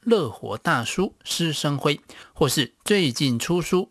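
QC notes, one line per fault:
Throughout: aliasing, sibilants sound gritty and metallic, with energy running hard up to 12 kHz; content above that folded back down after unfiltered downsampling to 24 kHz, roughly 20 dB below the speech.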